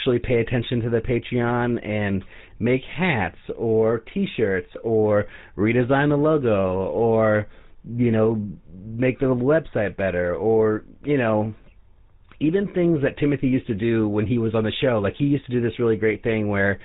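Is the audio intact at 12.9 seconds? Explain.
No. At 12.9 seconds, as throughout the clip, the speech has passed through the GSM full-rate codec. It models the vocal tract and excites it with sparse, regularly spaced pulses, discarding everything above 4 kHz. The result is plainly audible buzzy, gravelly roughness, consistent with a rate of about 13 kbps.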